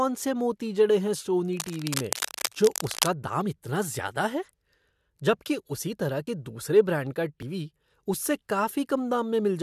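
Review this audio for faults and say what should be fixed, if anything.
Cable scratch noise, 1.53 to 3.08 s, after "से मोती जड़े हैं" and before "दाम इतना ज्यादा": rough rustling bursts only a few decibels below the speech, likely from a worn cable or connector being moved.

Dropped buffer (overrun), at 6.27 s after "जबकि उसी तरह" and at 7.42 s after "दूसरे ब्रांड का": the speech jumps ahead, losing about 20 ms and then about 70 ms. The likely cause is the recording program not reading samples before they were overwritten.

To prevent these faults, replace or secure the faulty cable and connector, and give the recorder a larger buffer or higher processing priority.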